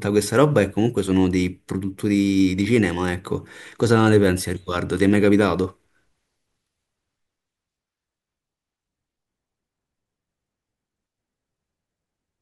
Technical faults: none

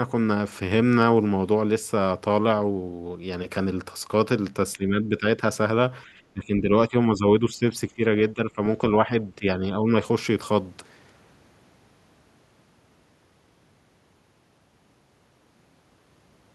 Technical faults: speech suppressed in double talk

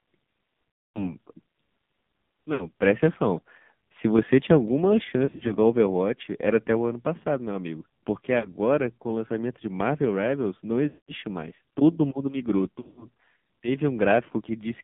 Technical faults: AMR narrowband mobile codec; lost AMR speech frames; microphone volume stepped down

